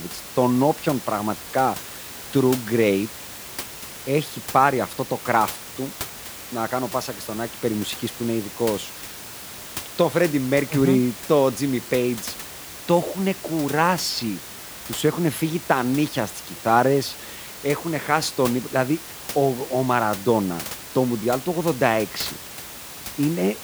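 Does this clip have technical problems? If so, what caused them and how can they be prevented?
No, nothing in this speech clip points to a technical problem, and the only thing in the background is the ordinary noise of the room, sitting about 15 dB below the speech, which is part of the recording itself rather than anything the system did.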